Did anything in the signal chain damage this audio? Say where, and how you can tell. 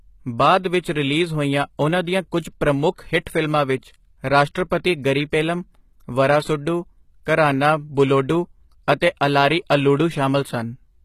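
Yes, at the codec stage. Throughout the speech the treble sounds synthetic, gritty and lispy on s sounds, with nothing above 14.9 kHz. This is likely HE-AAC compression at a low bitrate near 20 kbps. Unlike simple low-pass filtering, the treble is still there, just rebuilt rather than original.

Pre-echo, also from the codec: a brief hiss smears attacks at 0.80–0.84 s before "ਰਿਲੀਜ਼ ਹੋਈਆਂ ਉਨ੍ਹਾਂ ਦੀਆਂ", at 4.70 s before "ਗਰੀ ਪੇਲਮ", and at 9.00 s. Unlike reverb, the noise comes before each attack, not after it.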